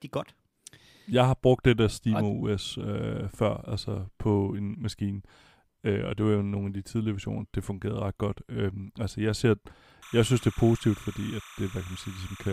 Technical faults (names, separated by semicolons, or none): timecode bleed